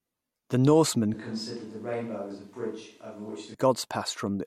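From 1.14 s to 3.54 s the speech abruptly turns roomy and thin, about 10 dB quieter with audible room noise, likely a switch to a distant microphone.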